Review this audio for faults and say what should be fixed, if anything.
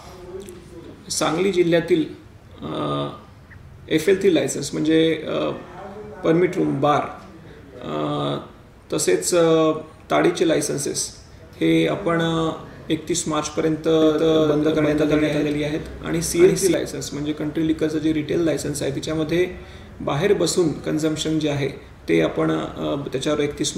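Doubled audio track, from 14.02 s to 16.74 s. For this stretch the sound is heard twice: a second full-band copy trails the original by roughly a third of a second at about the same level, with no decay or room colouring, and it switches in and out abruptly at both ends. The likely cause is a second capture path, slower than the first, being mixed in, or an edit that left two copies out of step. To prevent it, make sure each source reaches the mix through a single path, and check edit regions for stacked, offset copies before bouncing.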